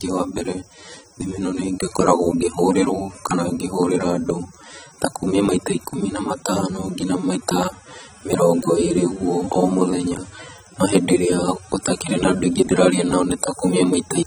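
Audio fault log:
Throughout, AAC compression: The speech sounds dull and smeared, and the damage is plainly audible. The top end is missing. Sibilants turn fizzy and sustained sounds warble. The likely cause is AAC-LC coding at a low rate, around 24 kbps. At that rate the encoder spreads too few bits across each frame's frequency lines. It lowers the cut-off and leaves holes in the spectrum or fills bands with substitute noise.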